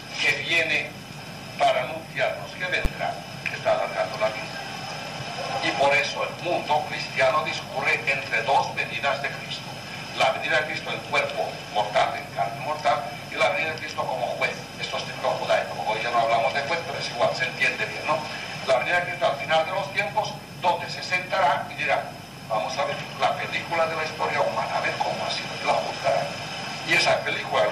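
At 2.85 s a single loud bang marks invalid numbers at full scale: a calculation produced infinite or invalid values, which became the largest positive or negative value for a 10 ms block. With a block this short, the output jump is heard as one hard bang.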